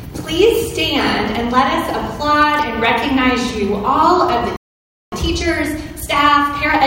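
At 4.56 s the sound cuts out mid-flow and stays silent for about 0.56 s until 5.12 s, a playback stall, likely the player running dry or its thread being blocked. From 5.12 s to 6.84 s the audio hurries at about 1.25 times normal speed with unchanged pitch, time-compressed catch-up trimming the backlog with small cross-faded cuts.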